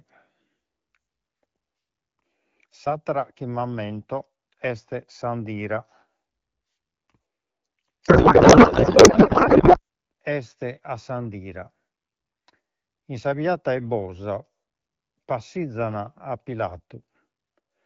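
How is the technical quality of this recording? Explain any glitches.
The recording has one clear glitch, a codec payload misread. From 8.07 to 9.80 s, just before "este a s'andira", the speech turns into garbled noise and warble that barely tracks it. The AMR wideband stream, carrying the speech at 12.65 kbit/s, was packed octet-aligned but decoded as bandwidth-efficient. Its fields landed in the wrong places, so the decoder built nonsense frames until the formats matched again.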